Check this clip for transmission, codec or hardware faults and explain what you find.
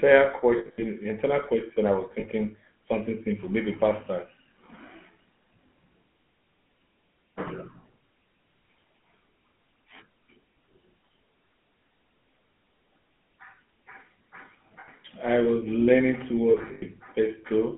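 Two faults are audible: GSM full-rate coding throughout, and lost GSM frames at four points.

GSM full-rate codec, whole clip: pulse-driven vocal-tract modelling gives buzzy, gravelly speech. A spectrogram shows energy confined to about 150 Hz to 3.4 kHz.

Lost GSM frames at 0.58–0.85 s, 2.20–2.26 s, 14.80–14.89 s and 16.50–16.83 s: missing frames are filled by repeating the last good one with decaying level, causing a brief metallic ring. The first and last spans are scattered dropouts with runs up to about 70 ms. In the waveform these show as smeared, fading stretches, and in the spectrogram as frozen, horizontally streaked harmonics.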